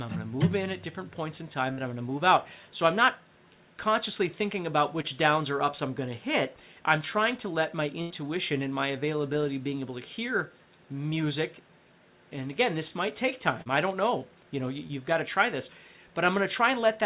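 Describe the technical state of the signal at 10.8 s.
At 10.8 s the audio is intact, with no dropout, glitch or distortion, only the narrow telephone-style band of the G.711 call path, with nothing above 4 kHz.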